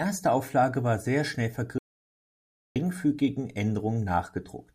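At 1.78 s, right after "war sehr schnell", the speech stops dead and the signal falls to silence until 2.76 s, an audio dropout to silence lasting about 0.97 s. No room tone or noise floor remains in the gap, so the input itself was lost, likely through a disconnected device, a broken link or an unintended mute, while the recorder kept writing samples. Speech resumes abruptly mid-flow, and whatever was said during that second is gone.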